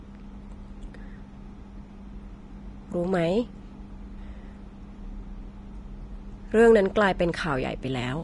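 From start to finish the speech sounds hissy and grainy, with roughened tones and smeared consonant onsets, likely Vorbis compression at a rate fitting roughly 30 kbps. Coarsely quantised treble turns fine detail into noise, and a spectrogram shows nothing above 10.6 kHz.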